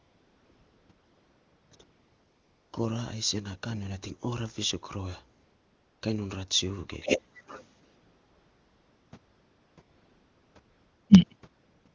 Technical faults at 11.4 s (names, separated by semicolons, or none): AMR comfort noise